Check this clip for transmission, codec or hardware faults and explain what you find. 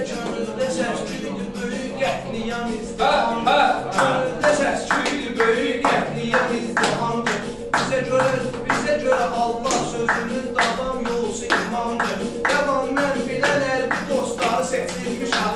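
One fault appears near the end of the clip. From 14.12 s to the end, the resampler restarted on every block, which fits a conversion from 24 kHz to 48 kHz run on 40 ms blocks. Each block was converted without its neighbours' samples, so every edge carries a small error. The result is a faint buzz at 25 Hz, present only while there is signal. A waveform shows tiny discontinuities every 40 ms, and a spectrogram shows thin vertical lines at the same spacing.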